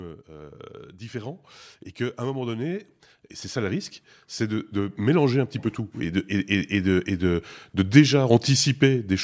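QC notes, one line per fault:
2.17–2.95 s and 3.52–7.38 s, automatic gain rising: the gain control judged the input too quiet and raised its gain gradually, by about 4 dB after "et qu'à" and then about 9 dB from "et c'est" onward, so speech and background noise swell up together.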